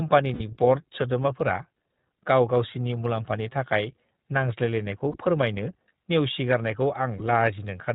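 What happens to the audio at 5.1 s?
Lost iLBC frames at 5.12 to 5.16 s: a brief dropout, fitting one lost 20 ms frame. The decoder fills it by repeating the last pitch cycle mixed with noise, heard as a short buzzy held vowel before clean recovery. Around it, the iLBC codec limits the sound to narrowband below 4 kHz, with a plainly audible rough, synthetic edge.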